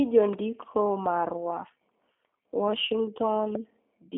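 Throughout, the speech sounds narrow, slightly rough and synthetic, with nothing above 3.7 kHz and a line band of roughly 200 Hz to 3.5 kHz. That is G.729 codec damage: the voice is rebuilt from a vocal tract filter, pitch predictor and sparse pulses, which fits an 8 kbit/s stream.

From 0.33 to 0.35 s and again from 3.55 to 3.57 s, a single sharp loud pop rises around ten decibels above the speech, which carries on beneath it. The likely cause is a sudden voltage step from a plug, switch, static or driver glitch.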